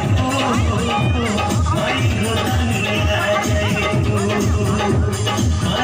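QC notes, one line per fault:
No fault found in this clip.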